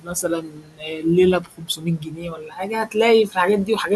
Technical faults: noise suppressor artifacts; speech cut by the noise suppressor

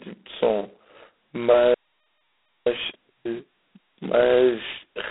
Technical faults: G.726 ADPCM; playback stall; time-compressed catch-up

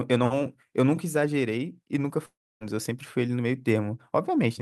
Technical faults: long network dropout

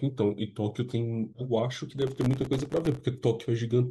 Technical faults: processor overload crackle

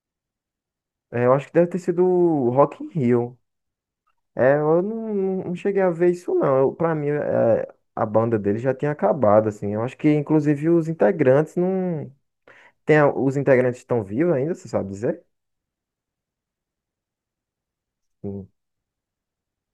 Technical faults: none

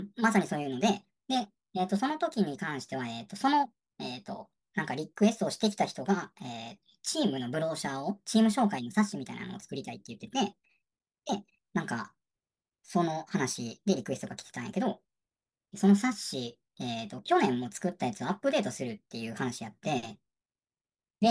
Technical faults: wrong sample rate

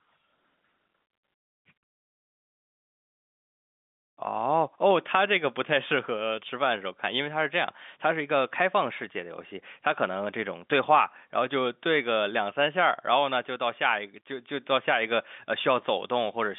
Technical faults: none

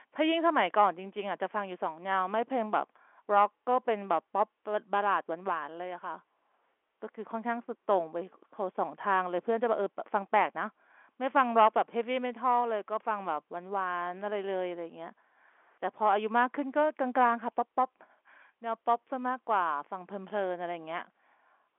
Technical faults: none

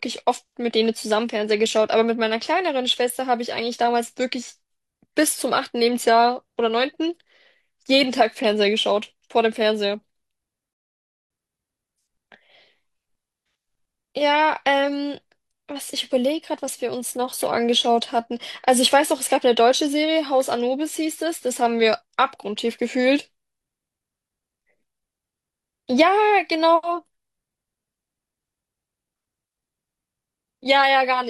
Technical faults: rebuffering stall

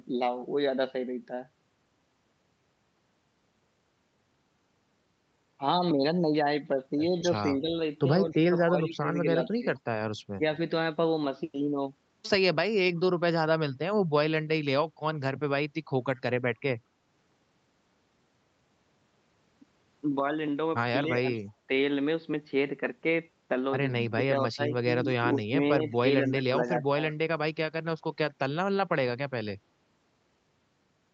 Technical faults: speech suppressed in double talk; echo leak

